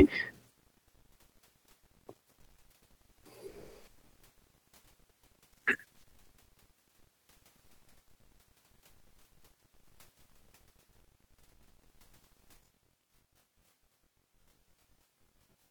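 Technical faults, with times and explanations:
12.57 to 15.71 s, channel delay (comb filtering): Near the end, the speech turns rough and slightly doubled, and it stays that way to the close. One channel runs late by about 20 ms, and the two are summed to mono. Content shared by both channels cancels at evenly spaced frequencies, starting at around 20 Hz. These fixed notches roughen the sound and give it a slightly doubled quality.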